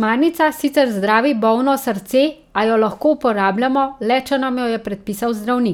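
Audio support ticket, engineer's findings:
No audible faults found in the speech recording.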